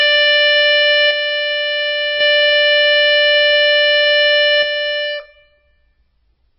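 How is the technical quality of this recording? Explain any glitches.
Pretty rough, honestly: the music is heavily compressed the whole way through, and it keeps losing one side of the stereo image.

The MP3 compression damage is constant. Nothing survives above 5.6 kHz, so the top end is dull, and there's a watery, swirly quality plus smeared attacks. That points to a very low bitrate, around 16 kbps, where the encoder likely chops the treble and zeroes quiet frequency lines that flicker frame to frame.

One channel drops out from 1.11 to 2.21 s, and again from 4.63 s to the end. In those stretches the centred material falls by about 6 dB, likely because one channel was lost before the signal was summed to mono.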